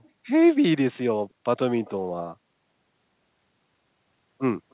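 Speech, narrowband with nothing above 4 kHz, carries a brief echo leak from 1.85 to 1.9 s. A faint copy of earlier speech, delayed about 305 ms and roughly 30 dB down, returns, likely from incomplete echo cancellation at a loudspeaker end. It shows as a weak, short smear echoing earlier spectrogram harmonics.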